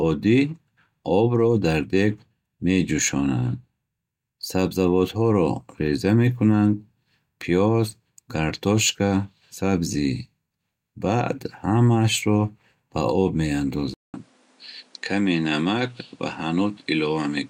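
The input likely switched to a poorer device at 13.94 s: a 200 ms gap, then speech stops above 11.4 kHz, duller but equally loud, over fresh background noise about 35 dB down.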